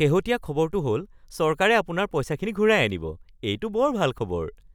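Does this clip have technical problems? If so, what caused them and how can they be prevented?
Yes. At 2.46 s and again at 4.18 s the speech jumps abruptly, as though about 15 ms had been cut out and the two sides butted together. The likely cause is a dropped buffer (overrun): the recording software didn't read its samples before the hardware overwrote them. A waveform shows a sudden step at each spot, and a spectrogram shows a thin vertical broadband line. Larger capture buffers and higher-priority audio threads prevent this.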